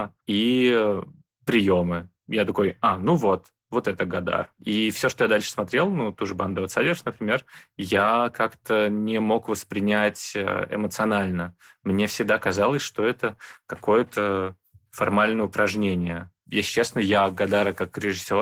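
Throughout the speech, the speech sounds slightly hoarse and robotic, and somewhat muffled. This is Opus voice compression in hybrid mode, which fits a low bitrate around 16 kbps: linear-prediction coding handles the lower band while a coarse transform layer covers the top.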